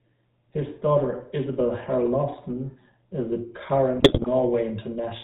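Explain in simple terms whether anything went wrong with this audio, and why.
The whole clip has been through the GSM full-rate codec, an early mobile phone speech coder. It rebuilds the voice from a simple model driven by regular pulses and drops everything above 4 kHz. That gives the speech its dull, buzzy, gravelly roughness throughout.

There are also GSM bit errors, caused by a weak phone link flipping bits in the data. At 2.06 s there is a very brief glitch. A longer burst runs from 4.0 to 4.28 s, right after "is a". There the decoder mangles the sound into squawky, gargling noise.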